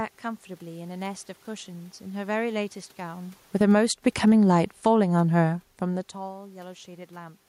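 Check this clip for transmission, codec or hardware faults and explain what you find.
One fault appears, automatic gain falling, from 3.46 to 6.17 s. The gain control judged the input too loud, or its background noise too strong, and eased its level down by about 7 dB, so the speech and the room noise beneath it sink together. That shared drop sets it apart from the talker's own movements around 3 and 6 s, which change only the voice.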